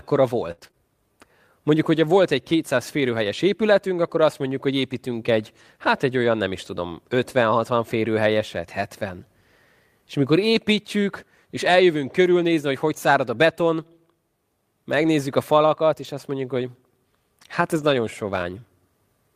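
From 0.51 to 0.75 s the speech breaks up in a burst of repeated packet loss, giving a robotic sound. Over this quarter second what sound like four separate dropouts follow one another closely, the longest about 59 ms. Roughly half the stretch is patched by stretching the preceding sound forward, which gives the choppy sound, and about 120 ms is simply missing. Unlike the later repairs, this one leaves real holes in the audio.

The next four faults are lost packets rebuilt from error correction. Each lost packet was replaced by a lower-quality copy carried in the packet that followed, so the audio never stops. Instead there is a short patch of grainier, noisier sound. The first comes at 6.63–6.85 s, just after "egy olyan nem is", and its 120 ms length fits about six 20 ms frames. The second is at 15.03–15.13 s and lasts 60 ms. The third is a single 20 ms blip at 16.03 s, between "a falakat" and "azt mondjuk hogy". 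The last follows "hát ez" at 17.77–17.91 s and lasts 80 ms. What separates these from the opening burst is continuity: the texture roughens, but nothing drops out and nothing is smeared into a robotic drone.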